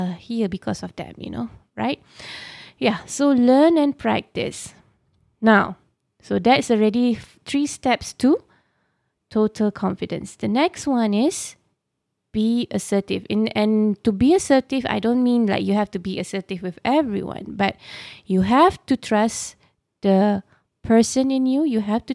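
No technical faults can be heard anywhere in the speech.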